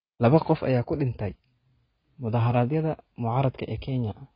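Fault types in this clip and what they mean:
AAC compression: dull, smeared speech with a fizzy warble and nothing above 5.1 kHz, likely a heavily starved AAC-LC encode near 16 kbps.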